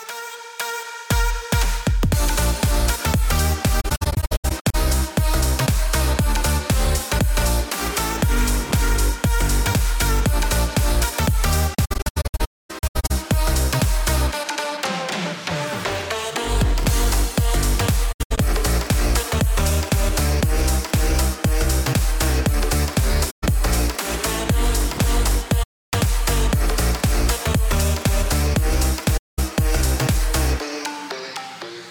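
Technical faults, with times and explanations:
3.8–4.75 s, 11.74–13.11 s, 18.12–18.38 s, 23.3–23.44 s, 25.62–25.93 s and 29.17–29.39 s, AAC frame loss with muting: the audio drops out in soft-edged holes. The first two are broken, stuttering gaps, and the longest silent stretch is around a third of a second. The decoder zeroed the lost frames' spectrum. Overlapping windows fade each edge over roughly 20 ms, so the holes fade in and out, unlike hard-cut dropouts, and are silent rather than smeared or repeated as with concealment.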